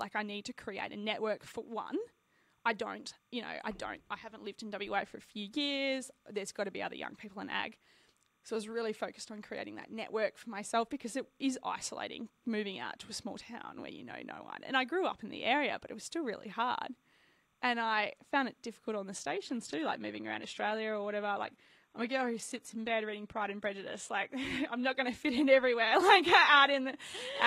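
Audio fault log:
throughout: timecode bleed, a faint chirping warble flipping between 1 kHz and 2 kHz, about 45 dB under the speech, which fits 29.97 fps linear timecode leaking in.
19.29–27.46 s: adaptive stream at a lower bitrate. Right after "it difficult on the" the sound turns artefacty, with nothing above 15.9 kHz, which sounds like a drop to low-rate HE-AAC.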